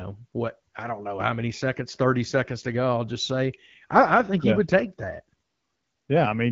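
No technical faults are audible in this speech.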